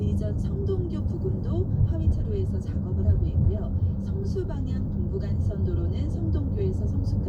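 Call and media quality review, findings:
No audible defects across the everyday-sound recording; nothing to log against capture, transport or playback.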